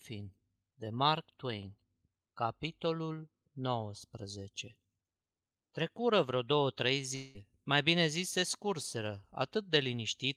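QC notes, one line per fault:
7.15–7.37 s, long network dropout. About 200 ms of the speech is lost. The gap is covered by a buzzy continuation of the last sound that fades over roughly 190 ms, so no hard silence is heard. The speech then resumes at "mai bine zis se", and the lost part is skipped, not delayed. The likely cause is a burst of lost packets, with the receiver stretching the last audio to fill the hole.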